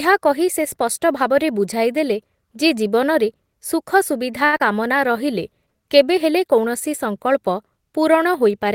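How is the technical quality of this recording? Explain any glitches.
The recording has a cluster of three network-related glitches, all within about a second, shortly after "ବୁଝାଇଦେଲେ ଯେ ଜୀବନରେ ସୁଖସୁବିଧା".

From 4.45 to 4.55 s there is a short stall from a late packet. A packet arrived after it was due, the jitter buffer ran dry, and the receiver held the last sound for 74 ms until the data came in, then resumed where it had stopped. Nothing is lost, but one sound is stretched unnaturally long, with a faint buzz or dip as it hangs.

From 4.57 to 4.62 s comes a short concealed packet loss. Here 60 ms of audio never reached the decoder in time. The receiver patched the gap with 29 ms of synthesized continuation of the preceding sound and dropped the rest, so the delay shrank by roughly 30 ms. The result is a brief smear or wobble.

From 4.86 to 5.24 s there is a jitter buffer slow-down. With the buffer running low or its target delay just raised, the receiver rebuilt its reserve by repeating small pieces of the waveform, adding 39 ms over this stretch. 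The speech plays at about 91% speed with unchanged pitch, so syllables sound drawn out before normal pacing returns.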